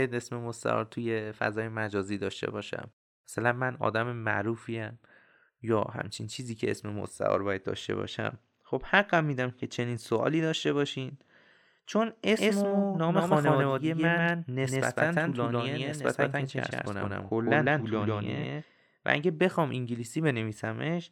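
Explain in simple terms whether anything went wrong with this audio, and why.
A doubled audio track runs from 12.37 to 18.63 seconds: an equally loud copy of the speech trails about 150 milliseconds behind, starting and stopping abruptly. Likely the sound was captured twice through a slower path, or an edit left two copies out of step.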